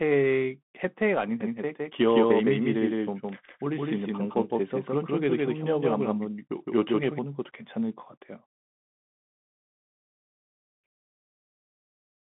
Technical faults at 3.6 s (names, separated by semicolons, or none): Bluetooth CVSD headset codec; doubled audio track